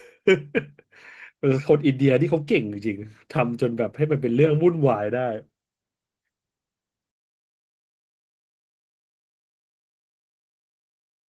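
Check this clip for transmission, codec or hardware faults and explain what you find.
The speech has one fault running through the whole clip: Opus voice compression. The sound points to Opus at around 16 kbps in hybrid mode, with SILK coding the lower band and a CELT layer above 8 kHz, in 20 ms frames. The excitation is coded coarsely at that rate, so the voice comes out plainly hoarse and slightly robotic.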